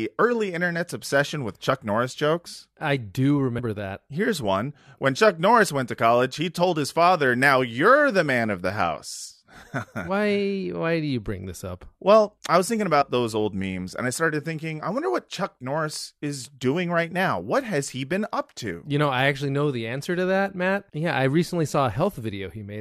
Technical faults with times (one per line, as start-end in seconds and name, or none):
3.58-3.60 compressed frames skipped
13.01-13.03 compressed frames skipped